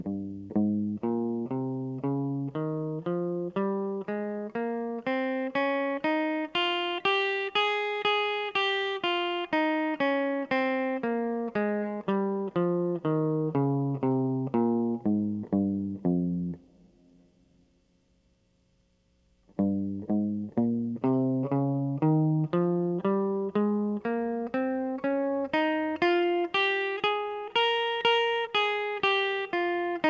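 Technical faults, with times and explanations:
No faults; the music carries nothing above 8 kHz, which fits the G.722 wideband codec on the call path.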